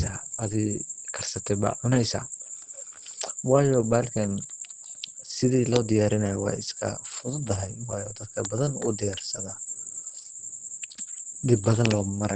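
A speech recording, muffled and hoarse throughout, with nothing above 9 kHz; this is likely Opus compression in its speech mode at a low bitrate, around 16 kbps.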